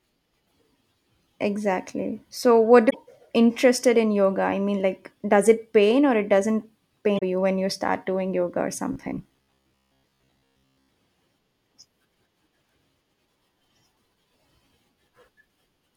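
At 0.43 to 0.51 s the speech breaks up briefly. It happens again at 2.86 to 2.95 s, just before "interested in yoga I", and at 7.15 to 7.23 s, between "pain or it doesn't" and "you when you start". Each is damaged data in a compressed stream. Bad bytes corrupt a few frames. The decoder loses sync and hunts for the next valid header. The result is a short glitch in the speech.

From 8.93 to 10.89 s, after "start doing yoga or", the speech turns into a rigid, metallic drone. It still tracks the rhythm of the words roughly. This is robotic sound from repeated short buffers. The likely cause is audio arriving too slowly, so the player loops the last fragment. Most of the stretch, around 70 percent, is repeats. They impose a fixed buzz near 66.7 Hz, which fits a buffer of about 15 ms.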